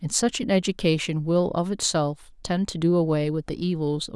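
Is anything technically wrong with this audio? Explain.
No, the speech signal shows no technical faults that a listener can hear.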